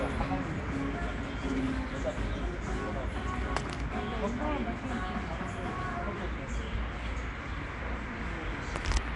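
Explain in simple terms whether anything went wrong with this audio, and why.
Something did go wrong, for the whole clip: the sound has a rough, hissy haze and a smeared, underwater quality, with nothing above about 10.6 kHz. That points to Nellymoser compression, likely, where quiet frequency bands get no detail and are filled with noise.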